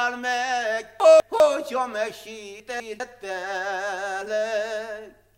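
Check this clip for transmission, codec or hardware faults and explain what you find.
Two short passages of chunks out of order occur, at 1.0 to 1.4 s and again at 2.6 to 3.0 s. In each, a 200 ms chunk arrived one chunk late and plays after the chunk that should follow it, so the two segments are swapped. No audio is missing, but the sequence is scrambled, and the hard joins at the start, middle and end of each span produce a brief jumbled stutter in the sound.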